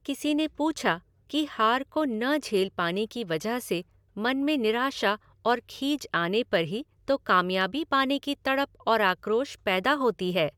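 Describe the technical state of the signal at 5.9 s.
At 5.9 s the speech signal is intact, with no audible technical fault at that moment.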